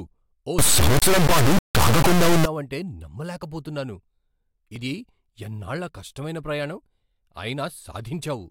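Integer read as float affects the speech from 0.59 to 2.45 s. The samples were stored as 32-bit integers but interpreted as 32-bit floats, so each bit pattern decodes to a number that is either vanishingly small, invalid, or enormously beyond full scale. The output slams between silence and the clipping ceiling, heard as a harsh, extremely loud buzzing square wave that collapses to silence wherever the sound turns very quiet.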